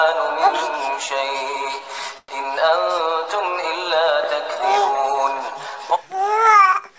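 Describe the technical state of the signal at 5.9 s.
At 5.9 s the audio is intact, with no fault present; the call path is working normally there, and the sound carries nothing above 8 kHz, as expected from a G.722 call codec.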